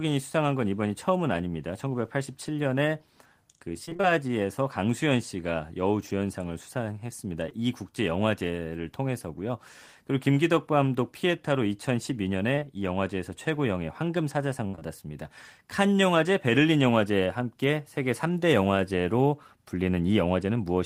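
Between 3.85 and 4.05 s there is repeated packet loss, giving a robotic sound. Five separate gaps, the longest 22 ms, fall in this stretch of speech, and about half of it (roughly 100 ms) is rebuilt by continuing the last sound. The result is choppy sound with pieces missing. On a spectrogram the harmonics turn into short, unnaturally steady blocks with small joins between them. The waveform shows repeated, periodic-looking segments instead of natural variation.

At 7.49 to 7.53 s comes the first short concealed packet loss. About 20 ms never arrived and was filled by extending the preceding sound, then blended back into the real signal. It is heard as a brief smear or wobble. A spectrogram shows a thin, slightly too-uniform strip, and the waveform a short copied cycle with a soft crossfade at its edges. The same fault returns twice back to back, at 12.55 to 12.59 s and 12.59 to 12.63 s, adding up to a 40 ms smear that can swallow a consonant.

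From 14.67 to 14.75 s there is a burst of packet loss of about 60 ms. The receiver carried the last sound forward and faded it as the gap went on, so a held buzz or fading hiss replaces the missing stretch. On a spectrogram this appears as a frozen band that dims toward the right. The waveform shows a repeating cycle whose envelope decays before the real audio returns.

Immediately after the burst, two more short concealed losses follow at 14.75 to 14.79 s and 14.79 to 14.83 s, each about 20 ms. They extend the damaged region to roughly 14.67 to 14.83 s, so the fade is followed by further smeared, slightly wobbly patches before clean audio resumes. The spectrogram shows continued flattened texture just past the burst.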